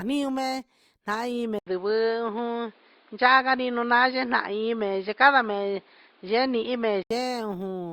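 An input switched to a poorer device from 1.59 s to 7.11 s. At 1.59 s the speech drops out for about 80 ms, then returns through a narrower channel with nothing above 5.1 kHz, so it sounds dull and boxy. Its level shifts by roughly 5 dB, and new background noise sits well beneath it. The likely cause is the system changing microphones mid-recording. At 7.11 s the full, clearer sound returns.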